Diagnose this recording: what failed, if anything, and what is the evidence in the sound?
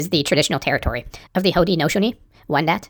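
The playback stage ran at the wrong sample rate for the whole clip. The speech is about 1.38 times too fast and roughly 5.5 semitones high, which fits 32 kHz material played at 44.1 kHz. Because speed and pitch rise together by the same ratio, this isn't a pitch-shifter or time-stretch fault.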